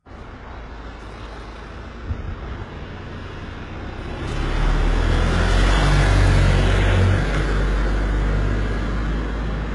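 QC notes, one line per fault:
Throughout, HE-AAC compression: the top end is gritty, with a metallic sheen on high-frequency detail and nothing at all above 11.3 kHz. This is likely the treble being rebuilt by band replication from copied lower bands, whose harmonics fail to line up, at a very low bitrate around 12 kbps. Unlike a plain low-pass or bandwidth-limited codec, the treble is present but synthetic, not simply dulled.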